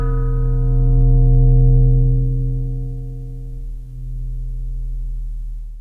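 No technical faults can be heard in this recording.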